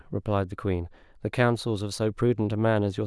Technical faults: none

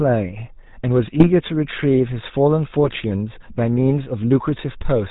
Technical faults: GSM full-rate codec; GSM bit errors

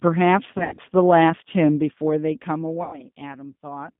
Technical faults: G.729 codec; VoIP packet loss concealed by the speech codec

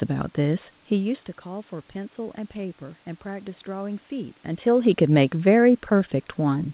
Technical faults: none

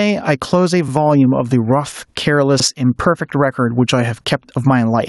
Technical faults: gain pumping

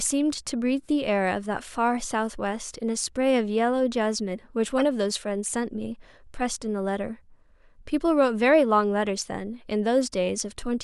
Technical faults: corrupt frame decoded

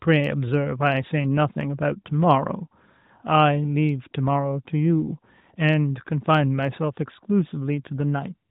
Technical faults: none

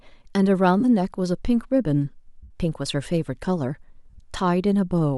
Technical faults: lost LE Audio frames

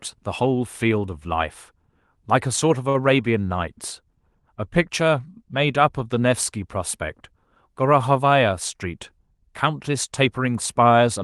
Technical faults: short stall from a late packet; dropped samples; jitter buffer speed-up

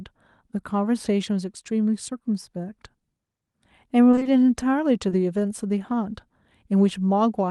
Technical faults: repeated packet loss (robotic sound); short concealed packet loss

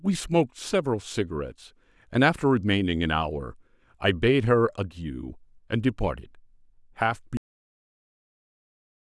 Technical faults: cut-off end

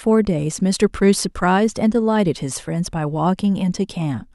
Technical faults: none

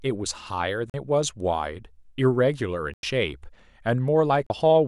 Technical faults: Bluetooth stall

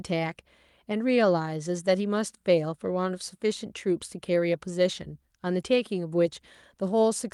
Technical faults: none

